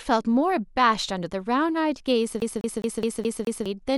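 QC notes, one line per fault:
2.40 to 3.66 s, CD stuck on one turn: the same 0.21 s slice of speech plays six times in a row, each pass cut off by a brief mute where the laser jumps back one track at a scratch, giving the quick, evenly spaced stutter of a skipping disc.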